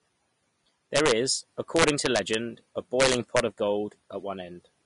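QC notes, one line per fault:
Throughout: low-bitrate audio saved at a high bitrate. The speech carries smeared, watery coding artefacts and nothing above 10.6 kHz, a flat ceiling on the spectrogram, likely from an earlier low-rate Vorbis encode re-saved as high-rate MP3, which cannot restore the removed detail.
0.96–1.12 s, 1.76–2.35 s, 3.00–3.40 s: integer overflow. Loud speech peaks pushed about 2 to 3 dB past full scale wrap to the opposite sign instead of limiting, giving harsh cracks sharper than clipping; the waveform shows peaks jumping straight across the full range.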